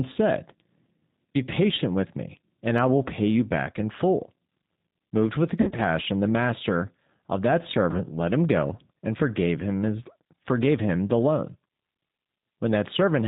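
A speech recording carried over the G.729 codec, with plainly audible damage throughout. The sound fits an 8 kbit/s stream. Everything above 4 kHz is gone, so the voice sounds narrow and muffled. The codec rebuilds each 10 ms frame from a vocal tract model, a pitch predictor and a few pulses. That leaves a rough, slightly synthetic texture on every syllable. Two dropouts show VoIP packet loss concealed by the speech codec. From 5.61 to 5.79 s, the speech is stretched into a buzzy tone or coloured noise that fades. The losses are scattered over about 160 ms. The longest gap is about 60 ms. At 7.91 to 8.00 s, a shorter 30 ms loss does the same on a smaller scale. In both places the decoder repeats its last pitch and filter at falling gain. Each frame builds on the one before, so the voice stays weak briefly after packets return.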